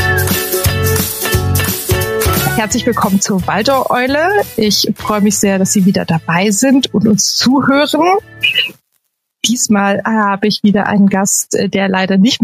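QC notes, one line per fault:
Throughout, gain pumping: input gain is likely set far too high, so a fast limiter clamps down on every loud sound and releases in the gaps. The gain swings by around 15 dB, leaving the sound squashed.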